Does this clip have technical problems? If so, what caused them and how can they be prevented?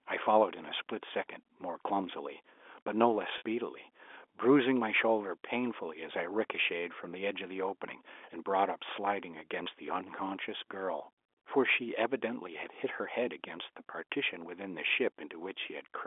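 Yes. Packet loss with pitch repetition occurs from 3.38 to 3.42 s and from 9.64 to 9.66 s. The receiver bridges each 40 ms and 20 ms gap by looping the last pitch period, which gives a brief held, buzzy tone. On the waveform this appears as identical repeated cycles, and on a spectrogram as frozen horizontal harmonics. The longer gap fits two lost 20 ms packets. A steadier network path, a larger jitter buffer or forward error correction would prevent it.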